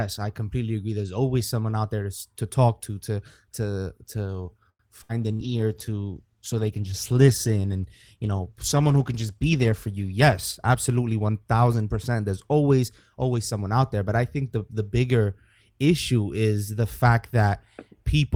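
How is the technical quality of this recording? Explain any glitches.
The recording has a cluster of network playback glitches around 5 seconds, a long stretch of reduced bitrate, and a later speed-up.

Short stall from a late packet, 4.69–4.82 s, just after "to to to to": a packet arrived late, so the last sound was stretched by 100 ms. On the waveform it shows as a flat, repeated segment.

Skip ahead, 5.03–5.12 s, also after "to to to to": roughly 100 ms was dropped to catch up. The spectrogram shows an abrupt splice where the sound jumps forward.

Call bitrate drop, 5.24–11.54 s: the bandwidth estimate fell and the bitrate dropped from 32 to 15 kbps, bottoming out for about 4.5 s. The audio turns coarse and dulled, and the upper spectrogram bands thin out.

Burst of packet loss, 5.33–5.42 s: 60 ms of audio never arrived, so the receiver extended the last sound and faded it out. The spectrogram shows a smeared, decaying band before playback resumes.

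Jitter buffer slow-down, 5.47–5.86 s: the receiver repeated pitch periods to add 67 ms, so playback runs at 85% speed without any pitch change. The waveform shows stretched, repetitive cycles.

Jitter buffer speed-up, 10.21–11.29 s: the receiver trimmed about a tenth of a second of excess buffered audio, so playback runs at 109% and the speech sounds hurried. On the waveform, syllables appear compressed in time.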